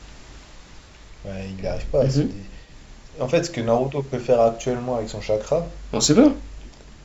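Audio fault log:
throughout, sample clock jitter: timing wobbles around a microsecond, adding hiss about 45 dB down on loud, bright speech; spectrogram shows haze vanishing in pauses.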